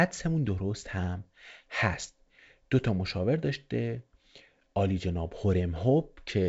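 No technical fault is audible in this speech clip, which comes through G.722 wideband telephone coding as expected, with the spectrum ending near 7.7 kHz and a sound consistent with the full 64 kbit/s mode.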